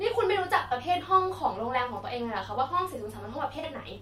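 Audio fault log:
0.66 to 0.72 s and 3.59 to 3.64 s, AAC frame loss with concealment: in each spot roughly 43 ms of speech goes briefly smeared and hissy, which fits two lost frames. The decoder bridges each hole by reusing the last good spectrum with its phase scrambled. That is why the gaps are filled with a blurred, noise-like version of the surrounding sound instead of dropping to silence or clicking, as a plain dropout would.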